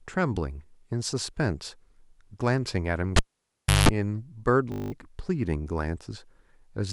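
At 3.16 s the cable is pulled and plugged in again. A pop cuts the speech to near silence for about 0.67 s, then 180 ms of 50 Hz mains buzz comes in as the connector tip makes partial contact, and a second pop marks the return at 3.89 s.

From 4.72 to 4.92 s a system hang loop occurs: playback stalls while the hardware keeps replaying the same 20 ms buffer ten times. The repetition fuses into a steady 50 Hz buzz, and roughly a fifth of a second of speech is lost.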